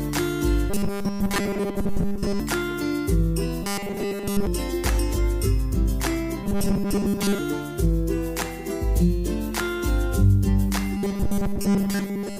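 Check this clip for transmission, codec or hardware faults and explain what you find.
There's one fault here, robotic sound from repeated short buffers, showing up four times: 0.7 to 2.4 s, 3.63 to 4.47 s, 6.44 to 7.39 s, and 10.97 s through to the end. The cause is likely a starved buffer, with the player looping a tiny slice of about 5 ms instead of waiting for fresh audio. That forces a steady 200 Hz metallic buzz over most of each stretch, and over all of the second one.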